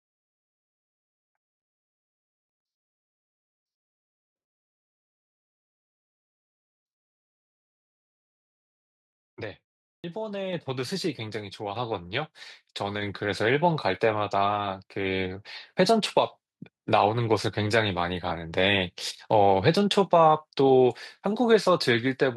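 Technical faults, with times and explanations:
9.97 to 10.04 s, clipped start after a pause: after roughly 0.4 s of silence, the output device had gone to sleep and needed time to wake and lock again. The first 69 ms of speech is swallowed, so the voice bursts in abruptly without its opening sound.
10.53 s, 11.76 s and 13.02 s, microphone volume stepped up: the call software judged the microphone too quiet and raised the device's input volume in single jumps of about 5, 4 and 3 dB. Voice and background get louder together at each point.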